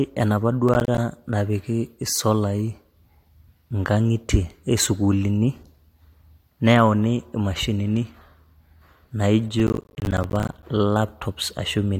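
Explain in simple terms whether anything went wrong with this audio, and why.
Processor overload crackle, from 0.69 to 0.98 s and again from 9.60 to 10.63 s. The computer handling the speech fell behind and couldn't finish each tiny chunk of audio, roughly a hundredth of a second long, in time. Every missed chunk became a brief hole of silence with sharp edges. Around ten misses in the first burst and dozens in the longer second one pile up into a gritty crackle over the speech.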